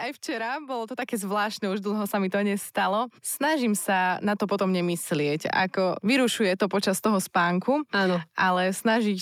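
Speech clip with a microphone volume stepped up at 1.02 s: the call software judged the input too quiet and raised the device's input volume in a single step, so voice and background noise jump together by about 4 dB and stay louder from there.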